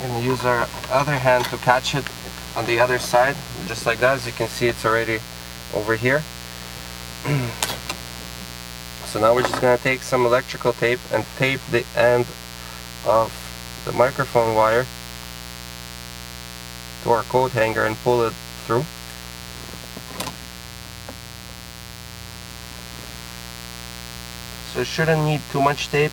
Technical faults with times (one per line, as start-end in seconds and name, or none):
0.00-26.12 mains buzz